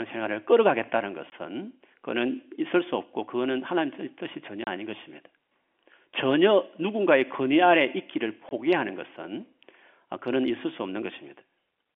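Speech clip over a telephone-band line with packet loss filled with silence: hard-edged dropouts at 1.30–1.32, 4.64–4.67 and 8.49–8.51 s, lasting 20–30 ms, which fits lost 10 ms packets.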